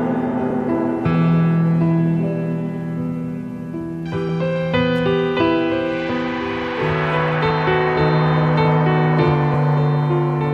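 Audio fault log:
0.50, 4.29, 6.09, 7.50 and 9.54 s: compressed frames skipped. The audio jumps ahead by one to three whole frames each time, about 30 ms at 0.50 s and 70 ms at 4.29 s, which fits a 26.1 ms frame.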